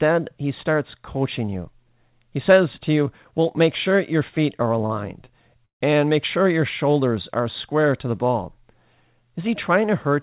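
At 4.86 to 4.92 s, after "sure your feet are", and at 5.26 to 5.29 s, short stalls from late packets emptied the jitter buffer. The last sound is held about 37 ms, then 16 ms, with a slight buzz or dip. At 5.65 to 5.83 s, before "and make sure your", a call audio freeze, likely from packets delayed in transit, stretches the sound into a fading buzz or hiss and then about 120 ms of silence, inserting a 154 ms gap.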